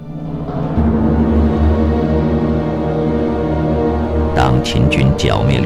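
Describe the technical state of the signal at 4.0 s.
At 4.0 s the signal is hard clipping, as it does across the whole clip: a gain stage is driving the level about 7 dB beyond what the converter or number format can hold, so every peak that exceeds full scale is sliced off flat. Only a small share of samples, around one to two percent, hit that ceiling, but each flattened top throws off high harmonics. The result is a brittle crackle riding on the loudest moments.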